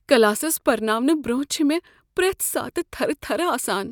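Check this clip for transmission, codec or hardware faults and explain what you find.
Nothing stood out on listening to this speech recording.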